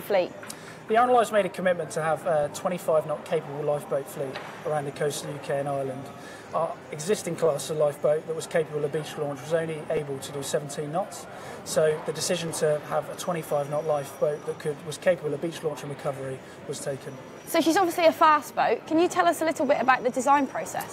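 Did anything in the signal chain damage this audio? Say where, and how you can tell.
Yes: overlapping chunks in the driver or buffer stage. Short stutter-clicks land at 4.95, 9.97, 12.48 and 20.02 s, each replaying 12 ms of audio. They fall on a 2.5 s grid, so each chunk starts slightly before the previous one ends, doubling the join.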